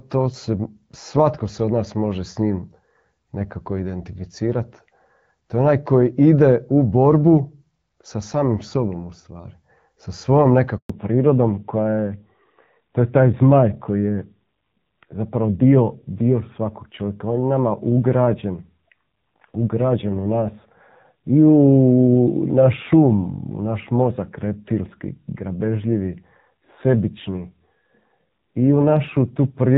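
A handover gap runs from 10.78 to 10.90 s: the call switched networks and, for 120 ms, no speech arrived, so the sound drops to silence. Fallback to narrowband follows at 10.90 s and lasts to the end. Everything above 4 kHz disappears, leaving duller, rougher speech, consistent with a move from wideband AMR near 12.65 kbit/s to narrowband AMR near 7.4 kbit/s.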